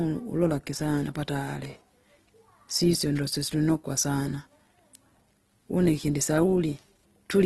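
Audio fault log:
Throughout, Opus compression. The speech sounds rough, noisy and grainy rather than swirly, and the damage is plainly audible. Nothing is heard above 12.1 kHz, so the top of the spectrum is cut off. The likely cause is a low-rate Opus encode in its music (CELT) mode. That mode keeps each band's energy. Short of bits, it fills the detail with folded lower bands or noise. The grain fits a rate near 16 kbps.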